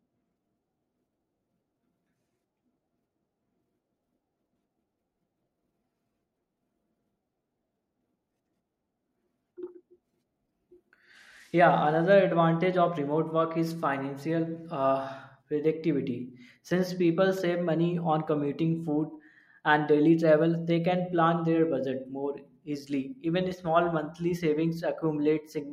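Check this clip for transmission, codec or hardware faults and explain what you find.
Nothing stood out on listening to this speech recording.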